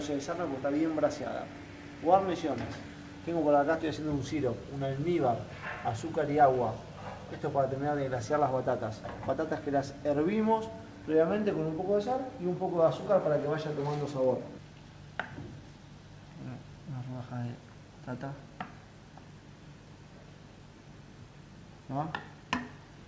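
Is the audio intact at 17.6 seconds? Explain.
Yes, the audio is intact at 17.6 seconds, with nothing at that moment beyond the ordinary band limit of a call path that carries nothing above 8 kHz.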